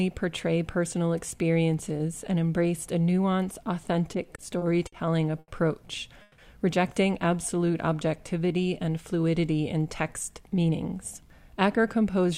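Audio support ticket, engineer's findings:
Repeated stalls (stutter), 4.13–4.94 s: five brief holds, longest 50 ms, 130 ms filled in total, about 16% of the span. Jitter buffer repeatedly running dry under late or slow packet delivery. Unlike a single stall, it is a choppy series, with nothing missing.

Short stall from a late packet, 5.39–5.50 s: one sound held 90 ms, then resumes from the same point. Jitter buffer underrun from one late packet; playout delay grows 90 ms. An isolated event, shorter than the freeze and without fade.

Call audio freeze, 6.22–6.40 s: sound continues as a fading tail for 160 ms, never reaching silence, then picks up where it stopped. Likely packets held up in transit, emptying the jitter buffer; delay grows 160 ms. Longer and fading, unlike the 5.39 s stall.

Jitter buffer slow-down, 7.55–8.54 s: audio runs at about 89% speed, pitch unchanged, sounds drawn out, 112 ms added. 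Receiver repeating pitch periods to rebuild buffer reserve. Continuous stretching rather than discrete holds, so no buzz or stutter.

Jitter buffer speed-up, 10.41–12.32 s: audio runs at about 107% speed, pitch unchanged, hurried, around 150 ms dropped. Receiver trimming pitch periods to shed excess buffered delay. The opposite of the 7.55 s slow-down: compressed rather than stretched, no gaps.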